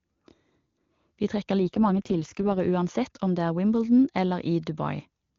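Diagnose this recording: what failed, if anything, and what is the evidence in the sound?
An AMR rate drop in the network link, from 1.6 to 2.6 s. The speech turns rough and synthetic, with no gap or band loss. This fits adaptation down to the 6.6 kbit/s mode.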